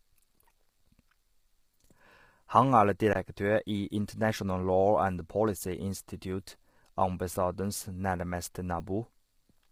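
Throughout, the speech sounds rough and grainy, with noise filling the gaps between harmonics and a thin, synthetic-sounding top band. The damage is heavy, likely from low-delay AAC compression (AAC-ELD), whose short frames blur pitch structure at a low bitrate, around 24 kbps.

From 3.13 to 3.15 s the sound stops for about 21 ms, an underrun with held sample. The output buffer emptied and the converter froze on its last value, which fits a 1024-sample gap. About 20 ms of audio is missing. At 8.80 s, just after "institute ambassadens nærmeste", a similar underrun lasts about 5 ms and skips a similar amount, which fits a 256-sample gap.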